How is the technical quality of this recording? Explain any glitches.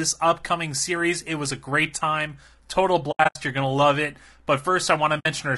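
The quality is compromised, with audible coding damage throughout and two patches of dropouts. Low-delay AAC compression, likely AAC-ELD at a low bitrate near 32 kbps, spreads too few bits across short frames, so the speech sounds rough and grainy throughout. AAC frame loss with muting first occurs from 3.11 to 3.36 s: missing frames were decoded as silence, leaving soft-faded holes totalling about 180 ms, the longest roughly 70 ms. It recurs at 5.19 to 5.26 s, where muted frames totalling about 60 ms fade out and back in.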